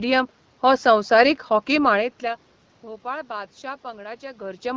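No technical faults can be heard in this speech clip. The level dips and rises around 2 s and again near the end, which is just the talker shifting position relative to the microphone.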